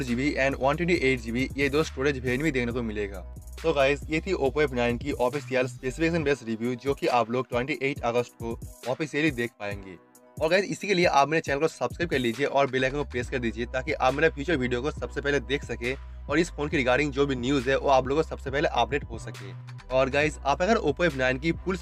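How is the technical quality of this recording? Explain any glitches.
No glitches to report; technical quality holds steady throughout, with no dropouts, clicks or interruptions to explain.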